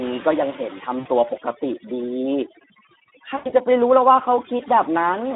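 Across the whole speech clip, overdone noise removal has pulled the background down to near silence, leaving twinkling specks where individual frequency bands flicker on and off around the reducer's noise estimate. Softer parts of the voice were caught below that threshold too. Unlike a simple gate, which mutes everything at once, this damage is spectral: isolated tones chirp in and out while the rest stays silent.

On top of that sits the Speex codec, with plainly audible damage. The voice is confined to a telephone band from 200 Hz to 3.7 kHz and has the hoarse, noisy grain of a CELP coder short of bits for its excitation, which fits a rate around 11 kbps. Generic bandwidth limiting would only dull the sound, but here the roughness sits inside the voice itself.

At 0.99 to 1.08 s, VoIP packet loss concealed by the speech codec replaces about 60 ms of audio, which fits three lost 20 ms frames. 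The decoder keeps repeating its last pitch and filter at falling gain, so the sound smears into a buzzy tone or coloured noise that fades. A second, longer gap of about 100 ms follows at 3.35 to 3.53 s. In both places the voice stays weak and distorted for a short while after the gap, as the decoder rebuilds its state. This smooth, tonal fill separates concealment from a plain dropout, which would leave a hard silence or a click.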